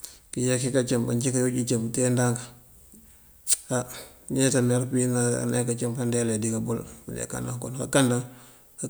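From about 1.09 s to the end, a steady, thin hiss sits under the speech, weighted heavily toward the top of the band so it sounds bright and airy rather than broad. It stays roughly 30 dB below the speech level. This is low bit depth with noise shaping: the audio is stored with too few bits, which fits about 10-bit resolution, and the rounding error is pushed up into high frequencies instead of spreading evenly.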